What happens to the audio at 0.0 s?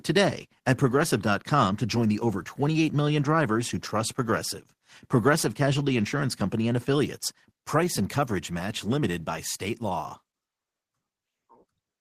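Nothing goes wrong at 0.0 s; the audio is intact at that moment.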